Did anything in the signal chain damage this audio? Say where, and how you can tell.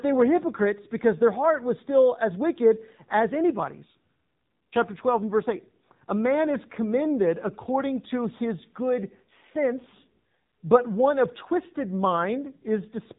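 Yes. The damage sits at the codec stage: the speech has passed through an AMR narrowband mobile codec, and it stays that way from start to finish. Nothing reaches above about 3.8 kHz, so sibilants and consonant edges are dull and boxy. The voicing has a buzzy, synthetic edge that is plainly audible, consistent with a low mode around 7.4 kbps, where a few excitation pulses per subframe drive a vocal-tract filter that cannot rebuild the natural waveform.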